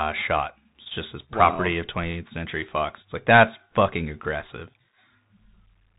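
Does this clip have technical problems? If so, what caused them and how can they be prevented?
Yes. The whole clip carries the sound of a Bluetooth CVSD headset codec. Nothing above about 3.8 kHz survives, so the speech is narrow and muffled. CVSD codes each sample as a single up-or-down bit and adapts its step size. Loud, bright sounds move faster than the step can follow, so they distort. S sounds turn scratchy, and a grainy hiss sits underneath. The coarseness fits a 64 kbps link. To prevent it, record with a wired microphone or a headset using the wideband mSBC or LC3 mode.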